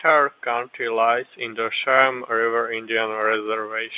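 No technical faults can be heard in this speech recording.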